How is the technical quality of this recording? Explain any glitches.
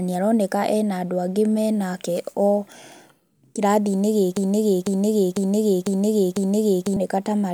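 Two clear glitches in this speech recording, one subtle and one hard to miss.

From 0.61 to 1.61 s, just after "nĩ aroneka", there's channel delay with comb filtering. One channel runs about a single sample late before the mono sum, so the first notch sits way up near 20 kHz. You get a faint dulling of the very top end rather than obvious hollowness.

From 4.37 to 6.97 s there's a broken-record loop. A half-second chunk (about 500 ms) plays five times back to back, identical each pass. Likely the player or stream stalled and kept resending its last buffer, so whatever should have played there is gone.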